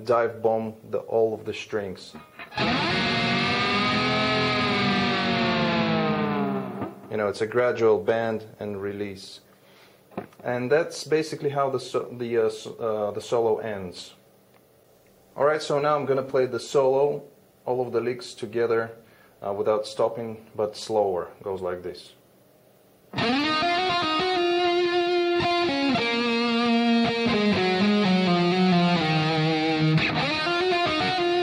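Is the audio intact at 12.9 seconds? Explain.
Yes, at 12.9 seconds the audio plays through cleanly with no dropout, click, distortion or other fault to be heard.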